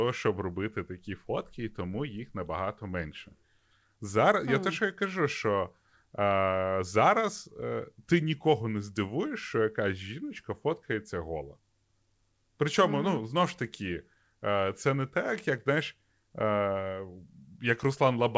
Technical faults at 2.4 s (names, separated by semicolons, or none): none